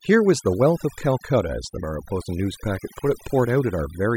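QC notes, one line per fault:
Throughout: overdone noise removal. The noise reduction is set too aggressively, cutting individual frequency bands whenever they sit close to the noise estimate. The background drops and breaks up into twinkling specks, and quieter parts of the speech vanish.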